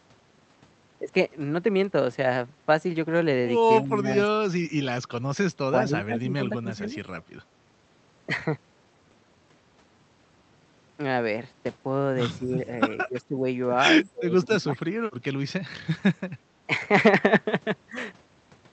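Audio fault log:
3.74–14.97 s, speech suppressed in double talk: the voice sinks at 3.74–4.49, 5.70–6.95, 12.38–12.64, 12.95–13.45 and 14.05–14.97 s, by roughly 10 to 25 dB. The far side was likely talking too, so the echo canceller, unable to separate talker from echo, turned both down.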